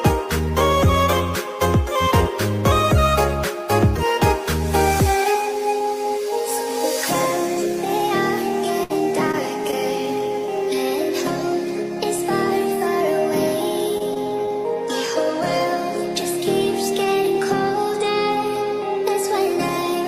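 At 8.83 to 8.91 s the sound stretches into a held, fading continuation, then jumps ahead. This is a burst of packet loss: about 60 ms never arrived in time, and the receiver extended the last sound for 61 ms while turning it down before resuming further on.

At 9.31 to 9.35 s and again at 9.71 to 9.74 s there are brief smears, each lasting only a few hundredths of a second. These are short concealed packet losses: 20 ms went missing each time, and the decoder covered the holes by continuing the last sound for 15 ms and 12 ms, then blending back in.

From 13.98 to 14.52 s the sound turns choppy. This is repeated packet loss: four separate gaps, the longest 17 ms, with 60 ms lost in total. Each hole was patched by extending the preceding sound, so roughly a tenth of that stretch is filler.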